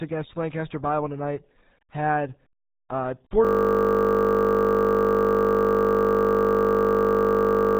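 From the first moment, the speech carries the RealAudio 14.4 codec sound. The band stops dead at about 3.8 kHz, and heavy coding damage makes the speech muffled and gargly. That degree of starvation fits the 8 kbit/s RealAudio 1 stream built for dial-up modems. A plain low-pass filter would dull the top end but leave the speech clean. Here the gargle runs through the whole clip, which shows the damage comes from crude coding, not just lost treble.

At 3.45 s a system hang loop takes over and lasts to the end. The machine or its driver froze while the sound hardware kept replaying the same 20 ms stretch of its ring buffer. Repeating that piece 50 times a second turns it into a steady buzz at 50 Hz rather than a stutter. Mains hum would sit underneath ongoing speech, but here nothing new comes through after the freeze. Only the identical fragment keeps cycling.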